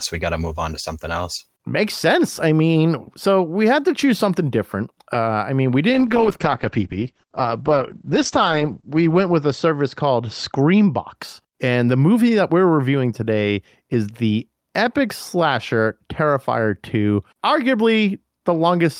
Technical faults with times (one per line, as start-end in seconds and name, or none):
5.95-11.21 call bitrate drop